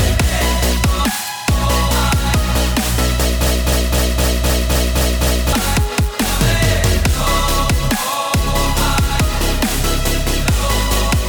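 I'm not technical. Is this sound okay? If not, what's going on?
No. From 3.47 to 5.53 s there is a broken-record loop. A 0.26-second piece repeats 8 times, likely from a stalled player or stream. The sound meant for that stretch is lost.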